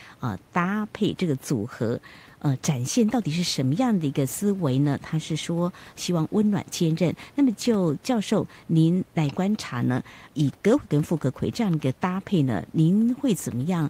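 Nothing technically wrong turns up in this bit of speech; there's just a faint wash of room noise sitting about 32 dB below the talking, which is simply the space the microphone was in.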